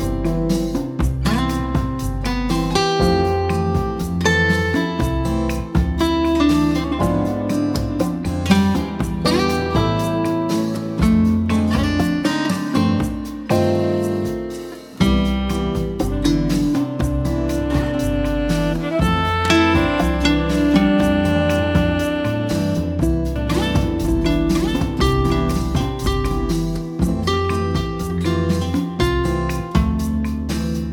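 From 23.36 to 26.52 s the sound is heard twice: a second, full-band copy trails about a second behind, roughly 5 dB quieter, with no decay, and it cuts in and out abruptly. This doubled audio track likely comes from a slower second capture path.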